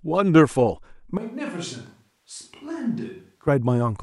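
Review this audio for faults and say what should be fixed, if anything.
Between 1.17 and 3.48 s the speech turns abruptly roomy, hollow and thin, about 10 dB quieter with more room noise, likely a switch to a distant microphone. Keep an eye on the close mic's signal and record a backup track so it never drops out of the mix.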